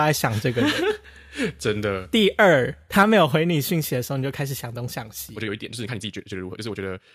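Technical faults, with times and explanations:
2.99–3.03 s, microphone overload: For about 40 ms the loudest peaks of the speech are flattened. They push roughly 2 dB past the converter's limit. A small share of samples is cut off at the converter's limit. This adds a short, harsh crackle to that syllable. The likely cause is an input volume set too high for the microphone. The fault ends as the level drops just after it.
3.03 s and 4.06 s, microphone volume stepped down: The level falls suddenly twice. The first drop is about 4 dB and follows straight after the distorted peak. The second is about 3 dB, a second later. The speech and the background fall together, so this is a change in input gain, not in the talker. The likely cause is call software reacting to the clipping by lowering the device volume in steps.
5.31 s to the end, time-stretched section: From here the speech runs about 1.63 times faster. 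The pitch does not rise with it. The pace changes abruptly at 5.31 s. The sound turns rushed. Short pieces of the waveform are dropped to shorten the audio while keeping its pitch. The likely cause is software squeezing this part to fit a set length.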